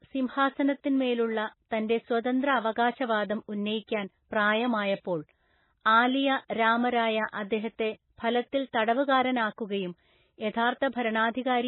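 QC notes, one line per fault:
Throughout, MP3 compression: the speech has nothing above 4 kHz, sounding dull and boxy, with a watery, swirling texture and metallic chirps on s sounds where weak frequency lines drop in and out between frames. The heavy damage likely comes from an MP3 encode at a very low bitrate, which fits about 16 kbps. On a spectrogram there is a hard flat ceiling at 4 kHz with speckled, holey energy below it, and the waveform shows smeared onsets.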